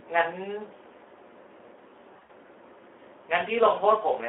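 Throughout the speech, the Speex codec runs with too few bits for its excitation signal, which fits a setting around 11 kbps. The decoder rebuilds each frame from a coarse pitch and filter model, so the voice comes out noisy and hoarse, with the damage plainly audible. The audio is confined to a telephone band of about 300 Hz to 3.4 kHz, so there is no upper band and nothing above it.

From 2.13 to 2.30 s, VoIP packet loss concealed by the speech codec takes over. About 100 ms of audio went missing in gaps scattered across roughly 160 ms, and the longest gap was 60 ms. For each missing stretch the decoder kept repeating its last pitch and filter at falling gain. The speech smears into a fading buzzy or coloured-noise sound, and it stays weak and distorted for a short while after the packets return.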